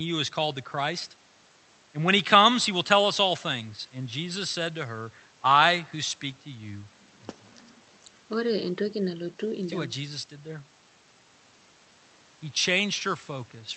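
No technical fault is audible in this speech clip. It has clearly passed through a WebRTC call path, and the high end stopping at around 8 kHz fits an Opus call codec running at roughly 32 kbps.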